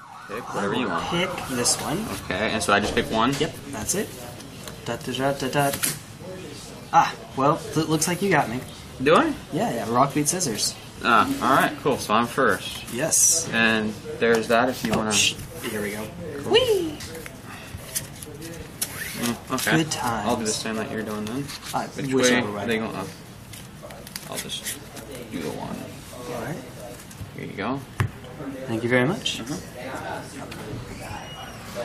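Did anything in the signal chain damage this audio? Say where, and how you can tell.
No, nothing in the signal chain damaged this audio.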